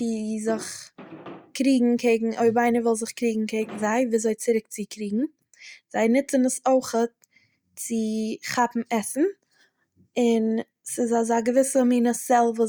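Speech recording; no technical faults are audible anywhere in the clip.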